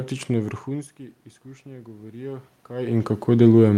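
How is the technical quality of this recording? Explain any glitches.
The speech carries one clear control fault. From 1.63 s to 3.56 s there is automatic gain rising: after the input level fell by about 19 dB, the gain control judged the signal too quiet and raised its gain by about 7 dB over nearly two seconds. Voice and room noise swell together, so the background climbs audibly along with the speech. The level shifts heard around half a second and around 2.5 s come from the talker moving relative to the microphone, not from the system.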